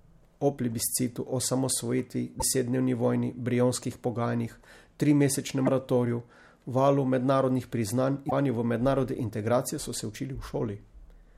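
Damaged data in the compressed stream gives brief blips at 2.37–2.42 s, 5.63–5.69 s and 8.27–8.33 s, as the decoder loses frame sync and hunts for the next header.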